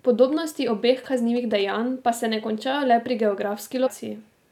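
From 1.04 to 1.62 s, GSM signalling bursts cut in under the speech. A nearby 2G phone is signalling, and the audio circuit rectifies its radio bursts. The result is a galloping dit-dit-dit of short 217 Hz buzzes, roughly 20 dB below the speech.

At 3.86 to 3.88 s, compressed frames are skipped. About 300 ms of audio never plays; roughly ten frames of about 23 ms each are dropped. The speech jumps ahead.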